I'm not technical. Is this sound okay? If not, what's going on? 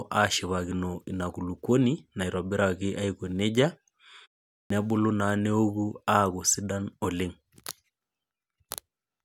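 No. At 4.61 s there is a clipped start after a pause. After about 0.42 s of silence, the playback device seems to doze off. It wakes too slowly, so roughly the first 0.09 s of speech, up to 4.70 s, is cut off. The speech then begins abruptly.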